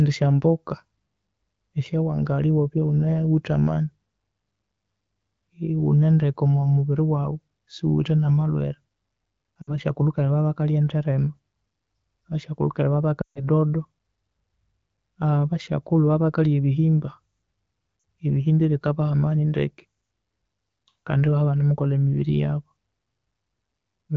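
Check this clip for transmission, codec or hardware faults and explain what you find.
There's one kind of fault here, lost AMR speech frames, showing up three times in the speech.

The gaps fall at 9.62 to 9.74 s, 13.21 to 13.45 s, and 17.99 to 18.03 s, right before "ebihimba ebikabaha". Corrupted frames failed their checksum, so the decoder rebuilt them from the last good pitch and vocal tract settings while ramping the gain down. The short ones drop to near silence within two frames. The 13.2 s one, roughly 140 ms and pointing to about seven missing frames, drops to near silence within two frames, as wideband concealment does. The light AMR-WB coding at 12.65 kbit/s sits under all three.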